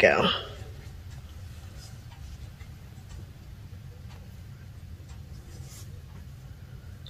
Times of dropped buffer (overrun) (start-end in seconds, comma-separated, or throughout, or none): 2.93, 4.16